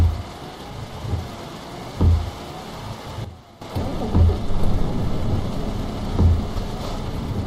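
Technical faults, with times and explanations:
3.25 to 3.62 s, sudden gain jump: sound and background drop about 12 dB at once, then jump back. Likely an unramped digital gain change.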